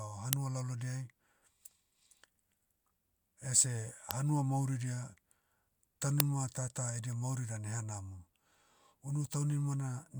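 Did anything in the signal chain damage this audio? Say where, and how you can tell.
Yes, at the driver or buffer stage: there are three uninitialised buffer events, at 0.33 s, 4.11 s and 6.20 s, the last just before "tata edia mauri dan". Each is a tiny, very loud burst of digital junk, about 1.33 ms for the first two and 2.67 ms for the third, which fits 64- and 128-sample blocks. The device played a block before anything was written into it, so stale memory got read out as samples.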